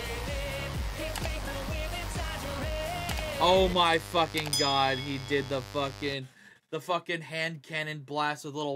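From the start to about 6.13 s, a mains buzz runs under the sound. Switching spikes from 50 Hz mains leak in twice per cycle. They spread harmonics into the kilohertz range. The result is a steady, raspy buzz, only around 15 dB below the sound.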